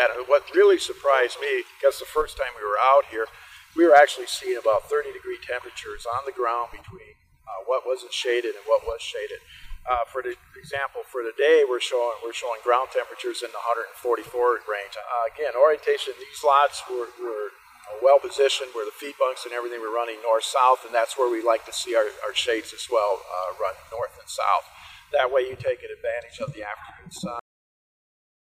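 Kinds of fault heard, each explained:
Cut-off end: at 27.39 s the sound stops mid-event, as though the final buffers were never written or played, and the remaining 1.1 s is silence. What separates this from an ordinary ending or a fade-out is the lack of any decay or tail. Level does not taper and no reverberation trails off. The sound is simply interrupted while still in progress, rather than finishing and then falling quiet.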